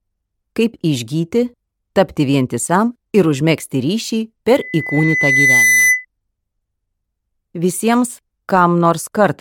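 A loudspeaker feedback squeal cuts into the sound from 4.54 s to 6.05 s. It is a single 2 kHz tone. It swells over about a second and then sits roughly 5 dB above the rest of the audio. The cause is an acoustic loop. A microphone is picking up the loudspeaker it drives. At 2 kHz the gain around that loop tops unity, so the tone keeps feeding itself. It stops at 6.05 s.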